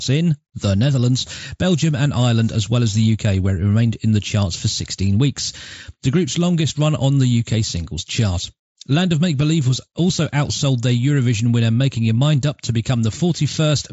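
No faults found in this speech: it comes over the Bluetooth mSBC headset link, which stops the band at about 7.7 kHz and adds a faint grain on the louder syllables.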